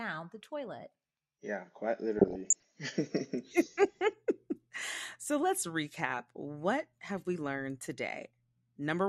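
A speech recording with a dull, band-limited sound throughout: the top end is missing, and a granular, gurgling roughness sits on the voice. That is most likely MP2 compression at a low rate, consistent with something around 80 kbps, where the encoder switches off upper sub-bands and quantises the rest coarsely. Unlike MP3 or AAC artefacts, which tend toward swirly pre-echo and metallic ringing, this damage is coarse and buzzy because whole fixed-width bands come and go together. Between 2.18 and 2.65 s the texture turns garbled, with burbling laid over the speech. This is DAB burbling: bit errors of roughly half a percent slip past error correction into a run of consecutive frames, and corrupted samples put short blips of noise into individual sub-bands. It differs from packet-loss dropouts, where sound gaps or repeats, because here the programme continues underneath with garbled bands on top.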